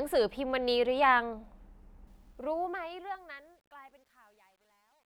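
A fade-out stage in this speech clip keeps too few bits and adds no dither, which fits roughly a 10-bit word length. That causes truncation distortion on a fade from 2.07 s: the shrinking waveform steps coarsely, turning gritty, worst from 3.13 s onward.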